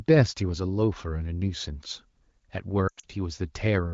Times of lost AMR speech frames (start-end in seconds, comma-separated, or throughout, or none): 2.88-3.04